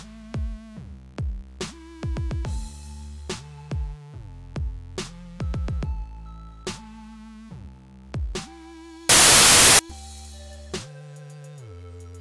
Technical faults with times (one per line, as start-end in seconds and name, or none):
9.09-9.79 file tags played as audio